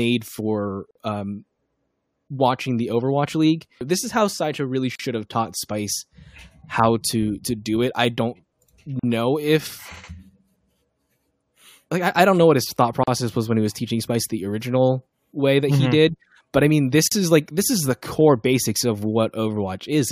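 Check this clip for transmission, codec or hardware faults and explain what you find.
The clip has one fault, repeated. Gaps at a join of encoded pieces fall at 0.91, 4.95, 8.99, 13.03 and 17.08 s, every 4 s. Separately encoded pieces were joined untrimmed, so encoder delay and frame padding leave brief silences, about 40 ms (46 ms first). The speech cuts out, then resumes mid-flow. One gap comes just before "have taught". Another falls between "know what his thought" and "was when he was". The last sits between "did but I mean" and "is like this is".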